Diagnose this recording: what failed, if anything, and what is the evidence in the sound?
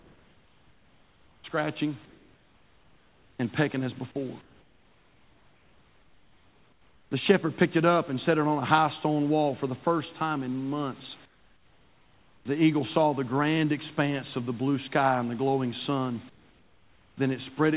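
Sample-format conversion: a grainy distortion follows the speech throughout, roughening quiet syllables and decays rather than sitting as a steady hiss. The error is roughly 40 dB below the signal, which fits the likely cause: low bit depth without dither, with samples truncated to about 10 bits.

Call processing: comfort noise in place of the background at 0 to 1.44 s, 2.05 to 3.39 s, 4.41 to 7.11 s (after "and pecking as before"), 11.25 to 12.45 s and 16.29 to 17.17 s. The pauses become steady, featureless noise about 7 to 10 dB quieter, likely from discontinuous transmission with RFC 3389 comfort noise.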